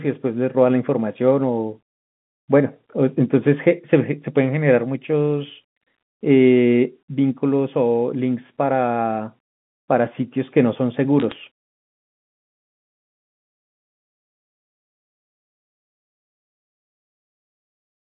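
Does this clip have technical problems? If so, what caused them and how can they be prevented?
Yes. From 11.20 to 11.36 s there is a short burst of sharp ticks and crackle laid over the speech, which is bit errors on a digital phone line. The audio is carried as G.711 telephone coding, limited to roughly 150 Hz to 3.5 kHz, where each 8-bit logarithmic sample stands alone. A flipped sign or high-order bit throws a single sample far from its true value and produces a click. The density here suggests an error rate of around two bits in a thousand during the burst. This can be prevented by fixing the line or transmission fault and adding error detection with concealment of corrupted samples.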